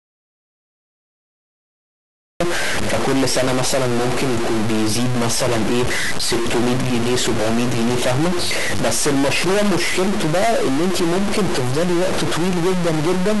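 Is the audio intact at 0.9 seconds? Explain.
No. At 0.9 s the clip is inside an audio dropout to silence that is already under way when the recording begins and lasts until 2.40 s. The signal is likely lost at the input while silence keeps being written, so there is dead silence with no room tone. That absence of any background is what separates it from a quiet pause or a noise gate closing.

A stuck bit also runs through the whole clip, likely from a faulty data line or converter holding one bit fixed. Around half the sample values are off by that bit's weight, which gives grainy noise or harsh, buzzy distortion depending on which bit is stuck. Unlike clipping, it is not limited to loud peaks, and it adds noise to quiet stretches as well.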